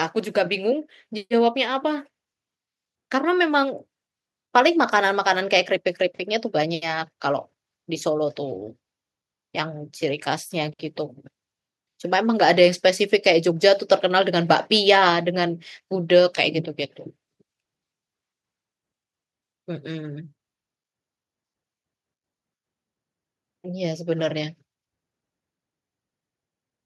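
Nothing in the speech stood out as a technical problem on listening.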